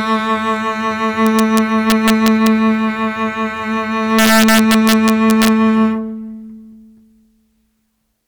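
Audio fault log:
1.27–2.47 s and 4.19–5.48 s: integer overflow. On the music's loudest peaks the level ran past the largest integer the path could hold, by about 1 dB in the first span and about 3 dB in the second. Instead of being limited, those samples wrapped to the opposite extreme, giving sharp, violent cracks harsher than clipping, heavier in the second span. The waveform shows peaks jumping across the range to the opposite sign, and the spectrogram shows thin vertical broadband streaks.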